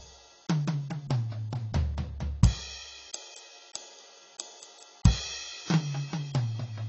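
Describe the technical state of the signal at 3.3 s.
At 3.3 s the music carries AAC compression damage running through the whole clip, likely from an AAC-LC encode at a low bitrate, consistent with about 24 kbps. With nothing above 8 kHz and the remaining bands coarsely quantised, the sound is dull and smeared.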